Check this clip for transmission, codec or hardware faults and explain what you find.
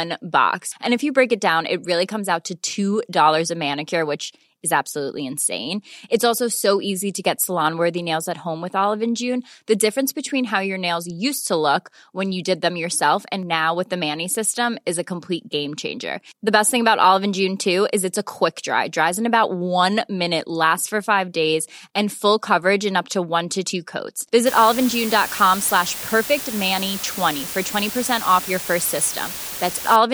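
One fault appears: from 24.46 s to 29.96 s, after "one to two coats", low bit depth with dither. The speech is quantised very coarsely, suggesting about five bits. Dither turns the rounding error into a steady, even hiss about 10 dB below the speech, with no gritty, signal-following distortion like undithered truncation.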